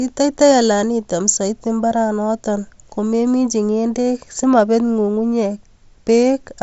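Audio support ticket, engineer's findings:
No fault found on the speech path; band-limit at roughly 7.7 kHz is consistent with a Bluetooth mSBC headset codec working as designed.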